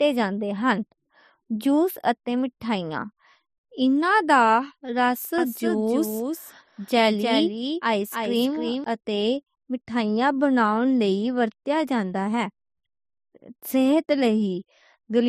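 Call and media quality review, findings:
Speech heard twice, 5.38–8.84 s, after "انہاں دا رس", before "اتے مٹھائیاں": a dry, full-band echo about a third of a second behind, some 5 dB quieter, cutting in and out abruptly. Doubled audio track, likely a second capture path mixed in late.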